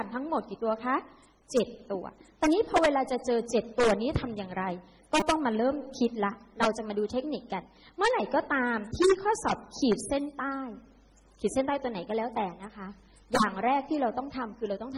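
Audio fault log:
5.20–5.22 s, repeated buffer: a 5 ms block is played four extra times after new audio fails to arrive in time. The rapid hard-edged repeats at 200 Hz sound like a brief buzz rather than a stutter, and roughly 20 ms of audio is lost.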